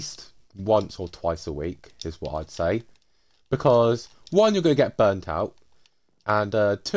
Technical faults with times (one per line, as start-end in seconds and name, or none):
none